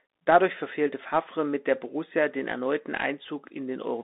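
From start to end the speech carries the Bluetooth CVSD headset codec. Only about 250 Hz to 3.7 kHz survives, and the one-bit delta coding, fitting a 64 kbps stream, adds granular hiss and scratchy s sounds that plain telephone band-limiting lacks.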